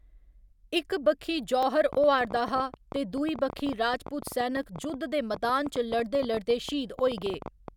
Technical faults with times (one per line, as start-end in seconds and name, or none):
1.63 overlapping chunks
1.93-7.69 train of clicks
4.63 overlapping chunks